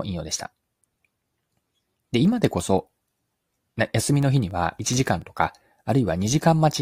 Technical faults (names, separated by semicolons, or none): CD scratch ticks